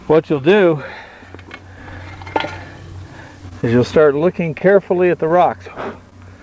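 From 3.20 to 3.73 s there is repeated packet loss, with a robotic sound. Four gaps fall close together, the longest about 22 ms. Each is patched by extending the last sound. About 40 ms goes missing, so the passage turns choppy.

From 4.18 to 4.22 s comes a short stall from a late packet. The packet arrived about 20 ms late, and the jitter buffer ran dry. The receiver held the last sound for 20 ms, then resumed in place. Nothing is lost, but the sound drags briefly.

From 4.59 to 4.62 s there is a short concealed packet loss. About 20 ms never reached the decoder in time. The gap was filled by continuing the previous sound, then blended back. It comes through as a quick smear or wobble.

From 6.10 to 6.14 s a second late-packet stall occurs. The delay jumped about 21 ms, and the last sound was stretched by 21 ms until the packet caught up. Again nothing is missing, only a brief held buzz or dip. 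Throughout, the audio stops at 8 kHz, which fits a wideband call codec such as G.722.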